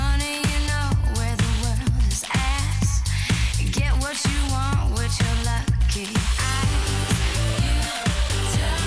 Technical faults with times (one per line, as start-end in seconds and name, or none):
none